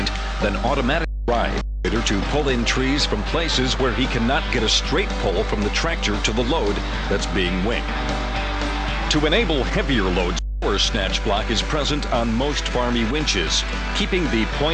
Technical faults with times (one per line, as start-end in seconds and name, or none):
0.00-14.74 mains hum